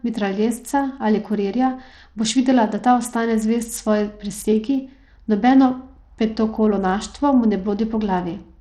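Bluetooth SBC compression runs throughout this speech clip, likely from a starved bit pool that fits roughly 80 kbps: flickering treble, gritty quantisation noise, nothing above 18.3 kHz.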